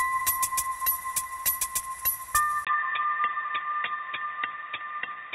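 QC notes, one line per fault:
2.65 s to the end, input switched to a poorer device: after a 20 ms gap, the sound turns dull and band-limited, with nothing above 3.8 kHz and a new noise floor roughly 40 dB down, at unchanged level, likely a mid-recording switch to a narrower input device.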